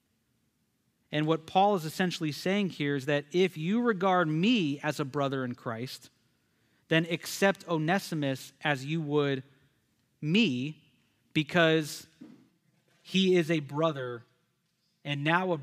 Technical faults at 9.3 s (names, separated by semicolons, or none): none